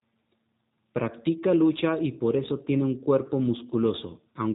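From start to finish the speech passes through a G.729 codec. The damage is plainly audible. Nothing above 3.8 kHz survives, so the sound is narrow and dull. The codec does not send the waveform itself. It sends a vocal tract filter, a pitch estimate and a few pulses per short frame, and the decoder rebuilds the speech from them. That rebuilding gives the speech a rough, slightly synthetic edge, consistent with a low-rate stream near 8 kbit/s.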